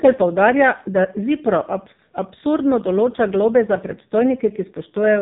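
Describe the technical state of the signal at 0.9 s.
At 0.9 s the speech sounds buzzy, boxed-in and synthetic, with nothing above 3.7 kHz. This AMR narrowband mobile codec damage runs throughout, its heavy artefacts pointing to roughly 5.9 kbps.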